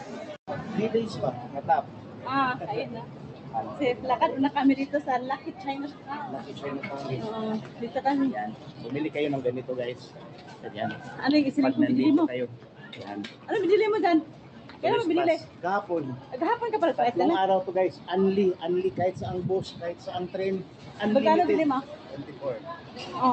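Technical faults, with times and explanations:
Throughout: noise suppressor applied to music or sounds. A speech-tuned suppressor treats held tones and tails as noise, so level swings around 10 dB. A waveform shows a pumping envelope, and a spectrogram shows sustains fading between onsets below an 8 kHz ceiling.
0.00–0.49, 1.46–4.04, 5.38–6.57, 7.63–8.88, 9.94–11.14, 12.54–16.32, 19.72–20.99, 21.92–22.98 s: sound cut by the noise suppressor. Steady or decaying passages drop by up to about 6 dB, so tails shorten. A waveform shows dipped stretches, and a spectrogram shows dimmed bands after attacks.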